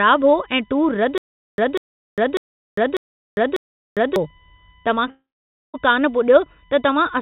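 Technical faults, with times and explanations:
Throughout, USB whine: a fixed-pitch tone at 1 kHz and its multiples, strongest at 11 kHz and about 35 dB below the signal. Bus current drawn in 1 ms frames leaks through power or ground, so the spectrogram shows steady horizontal lines at 1 kHz spacing.
1.18 to 4.16 s, stutter with silent gaps: a 193 ms burst plays five times, each followed by 403 ms of digital silence, repeating every 596 ms. The stream likely stalled and replayed its last fragment at each retry. The waveform shows identical blocks separated by flat silent stretches, and the original audio is lost.
5.10 to 5.76 s, long network dropout: about 640 ms of audio is missing. The receiver likely continued the last sound as a fading buzz or hiss, then left about 510 ms of silence before audio resumed. The spectrogram shows a smeared, decaying tail and then an empty band.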